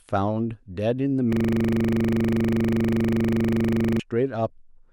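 From 1.33 s to 4.0 s the speech locks into a system hang loop. The machine or driver froze while the audio hardware kept replaying the same 40 ms stretch of its buffer, so one fragment repeats exactly, dozens of times, at 25 Hz. It sounds like a hard, rhythmic buzzing stutter. Unlike a network dropout or jitter glitch, the repeats are identical and perfectly regular rather than uneven gaps or varied fragments.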